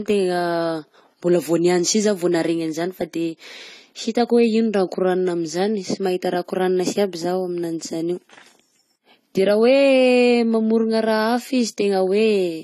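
Speech with AAC compression artefacts throughout: dull, warbly texture, likely from AAC-LC at a bitrate around 32 kbps; a spectrogram shows nothing above 14 kHz and patchy high bands.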